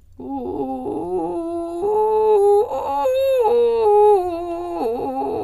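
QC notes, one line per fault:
No technical faults are audible anywhere in the music.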